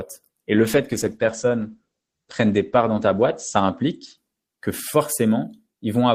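A call bitrate drop begins at 0.57 s and lasts to the end of the clip. The encoder was pushed to code the speech with far fewer bits, consistent with a fall from around 48 kbps to about 10 kbps. At that rate it trims the top of the spectrum, so bandwidth shrinks from 20 kHz to 8 kHz. The speech turns muffled and rough, worst during a stretch of roughly 2.54 s at the lowest rate.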